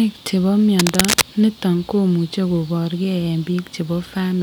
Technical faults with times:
0.79-1.22 cable scratch noise

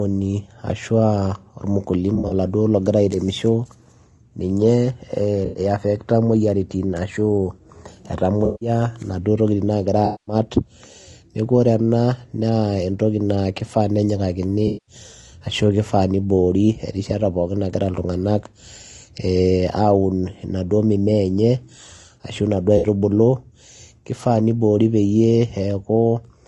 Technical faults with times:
0.00-26.48 low-delay AAC compression
2.15-2.33 AAC frame loss with concealment
5.45-5.59 AAC frame loss with concealment
8.45-8.69 AAC frame loss with concealment
10.05-10.35 AAC frame loss with concealment
14.67-14.95 AAC frame loss with concealment
22.77-22.87 AAC frame loss with concealment

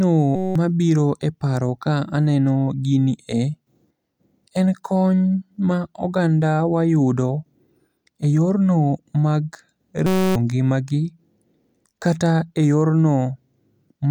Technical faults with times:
0.36-0.55 system hang loop
10.06-10.36 system hang loop

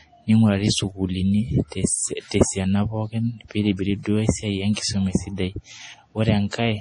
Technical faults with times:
0.00-6.80 MP3 compression
4.03-4.05 pre-echo

